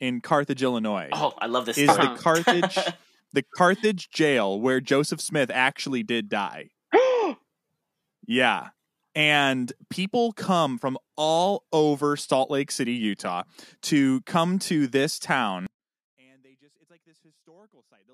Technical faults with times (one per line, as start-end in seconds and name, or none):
15.66-18.14 audio dropout to a faint residue